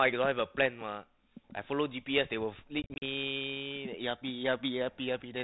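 Packets went missing on an ADPCM call carrying this speech, with about 120 ms of audio lost in short bursts scattered between 2.82 and 3.03 s, the longest single gap about 40 ms. Each hole drops to hard-edged silence, and because the decoder's adaptive predictor and step size drift out of step with the sender's, the sound comes back with slight, brief distortion before settling. The G.726 coding at 32 kbit/s adds only light coding damage and confines everything below 4 kHz.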